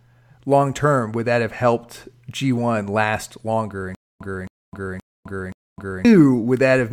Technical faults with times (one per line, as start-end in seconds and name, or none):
3.95-6.05 stutter with silent gaps